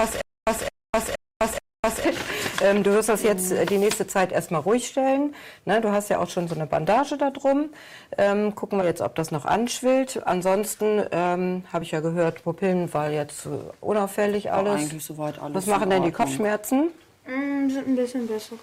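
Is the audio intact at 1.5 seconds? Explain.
No. Hard clipping runs through the whole clip: peaks driven about 9 dB past the limit are cut flat, adding high harsh crackle only on loud moments, unlike noise.

A stutter with silent gaps, already under way at 0 s and lasting to 2.05 s, repeats a 215 ms burst every 470 ms with 255 ms of digital silence between, most likely from a stalled stream. True silence separates it from a smooth loop.

At 1.53 to 1.55 s, compressed frames are skipped. About 40 ms of audio vanishes, which fits two 20 ms frames, so the audio jumps ahead.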